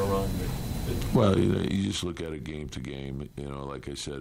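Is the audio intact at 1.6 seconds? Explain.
No. At 1.6 s a ticking, zipping texture rides on the sound, part of a zipper noise fault running from 1.24 to 2.28 s. Over that stretch the level falls by roughly 15 dB, applied in about ten abrupt 2 dB steps per second rather than as a smooth ramp. Each sudden jump in gain puts a small click into the waveform, and that regular train of clicks is the zipping heard while the level drops.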